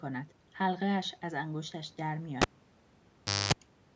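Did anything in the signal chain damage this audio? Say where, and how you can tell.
Yes. The fault is in the analogue wiring: the cable was pulled and plugged in while live. A pop at 2.42 s is followed by near silence for about 1.07 s, including roughly 0.24 s of 50 Hz mains buzz as only the plug tip makes contact, and a second pop as the sound returns by 3.53 s. A waveform shows two sharp spikes bracketing a flat gap. A spectrogram shows broadband vertical lines at each pop and stacked 50 Hz harmonic lines during the buzz, under the call processing's 8 kHz ceiling.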